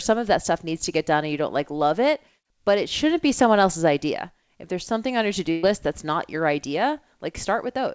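At 5.51 to 5.66 s, after "something on your to", a burst of packet loss removes about 120 ms. The receiver stretches the last sound into a fading, held tone, then resumes at "that's not your". A spectrogram shows a flat, dimming smear, and the waveform never drops to silence.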